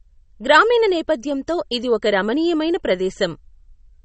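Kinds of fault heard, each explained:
MP3 compression: The speech has no content above 8.3 kHz and plainly audible watery, swirling artefacts throughout, likely from an MP3 encoder short of bits, which fits a 32 kbps encode. The encoder cut the treble and let weak frequency lines flicker between frames.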